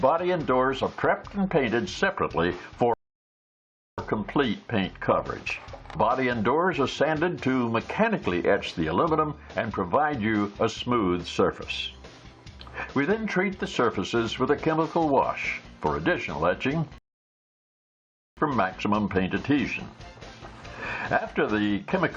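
At 2.94 s the audio drops to silence for 1.04 s, then resumes exactly where it stopped. At 16.98 s it happens again, lasting 1.39 s. These are rebuffering stalls. The player ran out of downloaded audio and waited for more. Nothing is lost, but time is added.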